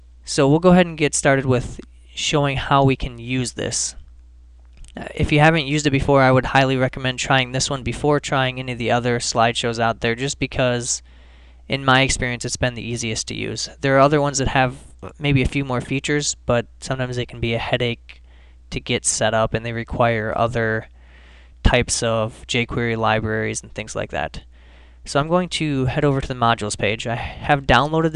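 Nothing stood out as a technical fault on listening.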